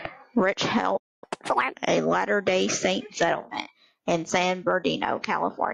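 Right at 0.49 to 0.54 s there's a quick squawky blip, which is damaged data in the compressed stream. The decoder hits corrupted frames, loses sync and hunts for the next valid header, so you get that short garbled chirp.

Then from 0.97 to 1.24 s the speech just cuts out mid-flow for about a quarter of a second, a playback stall. Most likely the player ran out of buffered data or its thread got blocked, leaving the output silent until it recovered.

Straight after, from 1.24 to 1.74 s, there's catch-up at higher speed. The player chews through its backlog at 1.5x, so the speech goes noticeably fast and chipmunky, up roughly seven semitones, then settles back to normal speed and pitch.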